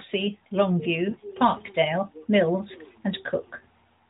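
Speech passed through a narrowband mobile path. The AMR-NB coding caps the audio at 4 kHz and leaves only light codec damage, consistent with the 12.2 kbps mode. From 1.10 to 1.17 s there are lost AMR speech frames: a gap of about 40 ms, which fits two consecutive 20 ms frames failing their checksum. The decoder bridges the hole by repeating the last good pitch and vocal tract parameters at reduced gain, so the sound briefly smears and dips instead of cutting out, then returns slightly weak. At 1.57 s a single sharp click marks dropped samples. The waveform jumps across a gap of a fraction of a millisecond, far too short to remove any audible material, and shows up as a thin vertical line across the spectrum. The likely cause is a few samples going missing from the stream at that point.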